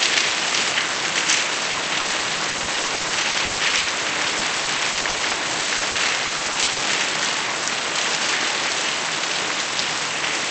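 From 1.71 to 3.87 s and 4.31 to 6.80 s there's repeated packet loss (robotic sound). Dropped chunks get patched by extending the previous sound, so it goes choppy and robotic, with gaps up to 130 ms early on.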